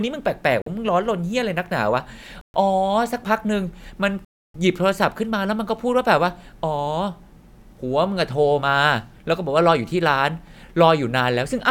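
Speech, with three short dropouts to silence at 0.62 s, 2.41 s and 4.25 s (about 46, 128 and 295 ms), likely Bluetooth stalls from the headphone buffer running dry.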